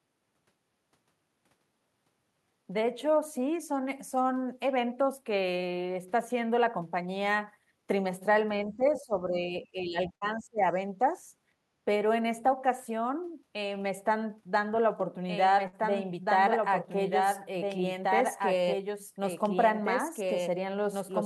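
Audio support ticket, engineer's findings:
Speech suppressed in double talk, 8.66–9.54 s and 9.71–10.66 s. Talker's level dips about 10 dB, then deeper, near 20 dB, in pieces. Likely echo canceller suppression during simultaneous talk. Near-end speech mistaken for loudspeaker echo and attenuated with it.

Burst of packet loss at 10.15–10.24 s and 15.67–15.76 s. Each gap about 60 ms missing, roughly 58 and 55 ms of concealment. Last sound held and faded by the receiver. Audio resumes past the hole. Consecutive packets dropped or arrived late.

Doubled audio track from 15.00 s to the end. Second full-band copy about 5 dB quieter, trailing by roughly two seconds. No decay or room colour, abrupt onset. Likely a second capture path or a misaligned edit layering the same audio twice.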